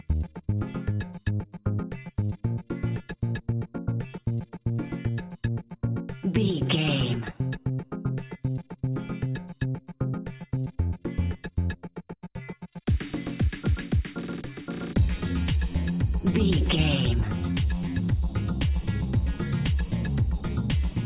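No technical faults can be heard anywhere in this audio. Nothing in the sound calls for a timestamp or a diagnosis.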